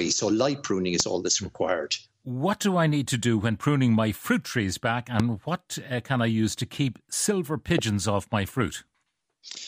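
A voltage spike, likely from a plug, switch or static discharge, adds three loud pops at 1.00, 5.20 and 7.78 s, each a single sharp click well above the speech, which continues underneath.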